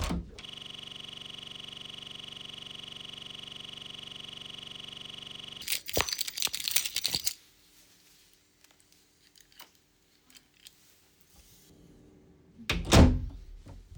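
System hang loop, 0.45 to 5.62 s: the computer or driver stalled while the sound hardware kept replaying its ring buffer, so one 42.67 ms slice repeats about 120 times. That loop rate of 23.4 Hz produces a rough, buzzing stutter, which fits a 2048-sample buffer.

Pre-emphasis left on, 7.27 to 11.70 s: a treble boost applied for transmission was never undone by the matching de-emphasis. High frequencies sit about 11 dB above 1 kHz at 10 kHz, consistent with a J.17 curve, making the sound thin, glassy and harsh on sibilant edges.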